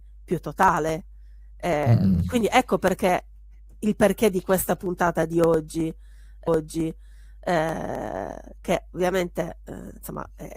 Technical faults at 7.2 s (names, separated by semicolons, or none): mains hum; stream segment repeated